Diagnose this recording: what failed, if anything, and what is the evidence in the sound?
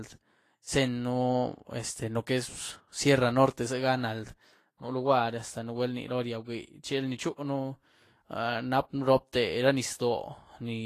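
Codec stage: this is most likely Vorbis compression run at a low setting, something around 33 kbps. Throughout the speech nothing survives above 14.2 kHz, and the remaining treble is plainly hissy and grainy, fine detail quantised so coarsely it's turned into noise.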